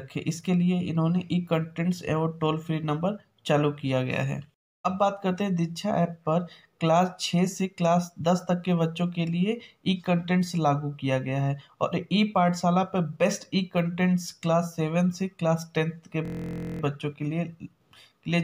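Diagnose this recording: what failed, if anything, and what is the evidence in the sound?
System hang loop at the driver or buffer stage. From 16.25 to 16.81 s, a 23 ms slice buzzes at 43 Hz. That fits a frozen 1024-sample buffer.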